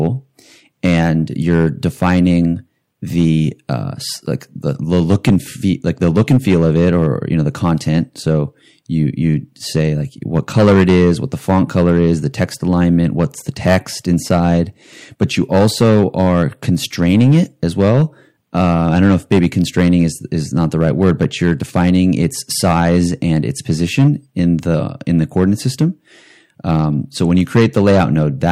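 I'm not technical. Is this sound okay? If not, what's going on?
No, there's hard clipping running through the whole clip. The speech is pushed louder than the recording chain can handle, so the loudest moments get their tops sliced flat. A small share of peaks are affected, which comes across as a gritty crackle whenever the voice gets loud.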